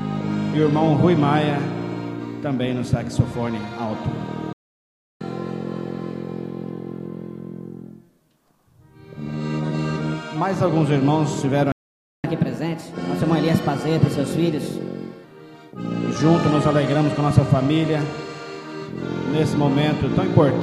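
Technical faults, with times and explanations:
4.53–5.21 s, playback stall: the sound cuts off mid-flow and stays silent for about 0.68 s, then resumes. The gap is most likely the player running short of buffered data or its output thread being blocked, so nothing reached the output until it recovered.
5.21–8.21 s, catch-up at higher speed: after the first stall the sound runs 1.1 times fast for three seconds, lifting pitch about a semitone and a half. The player is resampling its backlog to win back the lost time, so tempo and pitch rise together.
11.72–12.24 s, playback stall: a second silent break of about 0.52 s interrupts the sound, with the same starved or blocked output as the likely cause.
12.24–15.24 s, catch-up at higher speed: a stronger catch-up, 1.15 times speed for three seconds, raising pitch roughly two semitones.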